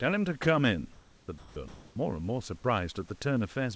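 From 0.92 to 1.28 s comfort noise replaces the background, likely from discontinuous transmission. The pause becomes smooth, featureless hiss with its level shifted by about 1 dB, and the spectrogram shows a flat, texture-free band.

At 1.38 to 1.56 s sound is dropped by the voice detector. About 100 ms of the sound, likely judged as background, gives way to steady noise, so the waveform shows the sound collapsing into a uniform low floor.

From 1.68 to 1.96 s comfort noise again stands in for the background, likely through the same mechanism. It sits about 28 dB below the loud parts at an unchanged level and looks just as flat and detail-free, with everything stopping at the 8 kHz ceiling of the G.722 call path.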